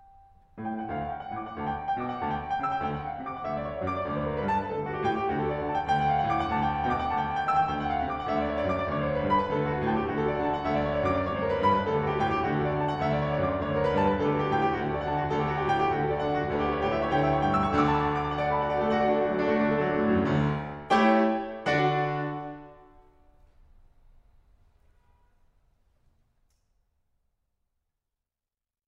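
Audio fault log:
No faults heard anywhere in the music.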